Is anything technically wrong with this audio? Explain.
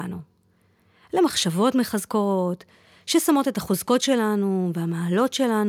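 No, nothing technically wrong can be heard in this speech recording. There are no faults to report at any point in it.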